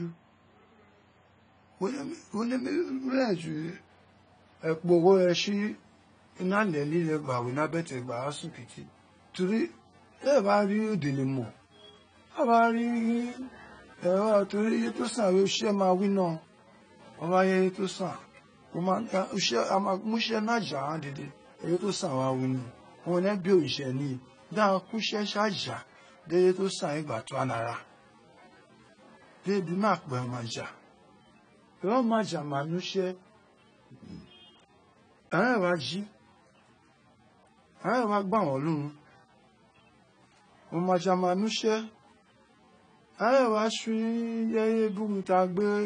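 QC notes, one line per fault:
Throughout, AAC compression: nothing is left above 9.7 kHz, and the speech sounds dull and smeared, with plainly audible warbling and fizz on sibilants. This is likely AAC-LC at a low bitrate, around 24 kbps, lowering the cut-off and coarsely quantising the spectrum.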